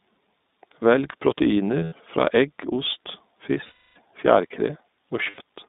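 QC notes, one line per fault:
Throughout: iLBC codec. The audio sits in a narrow 200 Hz to 3.7 kHz band, so it sounds boxy and thin, with the plainly audible slightly rough, synthetic edge of this codec. Each 20 ms frame is coded on its own, and the texture fits the 15.2 kbps mode.
1.84–1.94 s, 3.64–3.98 s, 5.30–5.41 s: lost iLBC frames. There are two 80 ms gaps, the first just before "fra egg ost", and one 320 ms gap. The decoder repeats the last pitch cycle with noise, so each gap sounds like a held, buzzy vowel. The long one fades out. The sound recovers almost at once afterwards.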